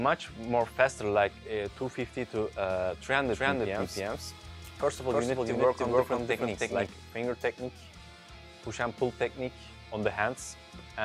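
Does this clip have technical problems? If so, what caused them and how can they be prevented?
Yes. A second, slower capture path likely fed the same audio in again from 3.25 to 6.87 s, producing a doubled audio track: an equally loud copy about a third of a second behind, cutting in and out abruptly. To prevent it, route each source through only one capture path and check for duplicate inputs before recording.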